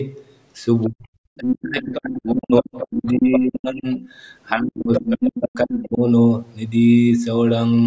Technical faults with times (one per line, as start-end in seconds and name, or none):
0.89-4.05 speech suppressed in double talk
2.56-3.40 other side's voice leaking through
3.94-3.98 other side's voice leaking through
4.48-4.55 other side's voice leaking through
4.52-6.03 speech suppressed in double talk
4.93-5.48 other side's voice leaking through